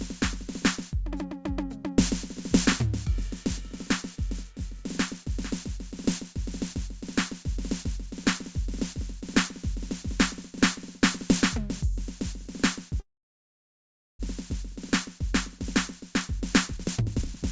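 At 13.00 s a call audio freeze interrupts the music, likely because packets stalled in transit and the jitter buffer ran dry. A brief carried-over tail gives way to about 1.15 s of silence, and the music resumes at 14.21 s from where it stopped, with nothing lost.

From 16.39 s to the end, the jitter buffer speed-up trims the excess delay, removing short pitch-period pieces repeatedly, roughly a third of a second in total. The music plays at 129% speed, pitch unchanged, so the tempo rushes. Throughout, the G.722 path leaves nothing above 8 kHz.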